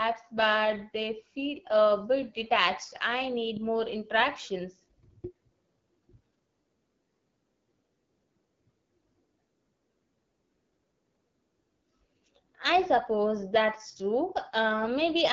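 AMR wideband (HD Voice) codec damage runs through the whole speech clip: nothing sounds above 7.5 kHz, and the voice is plainly rough and raspy, which fits one of the codec's lowest modes, around 8.85 kbit/s, where its pulse-driven vocal tract model has too few bits.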